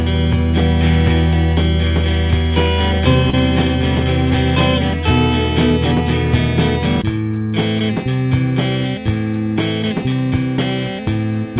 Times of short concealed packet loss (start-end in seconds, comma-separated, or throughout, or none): 3.30-3.35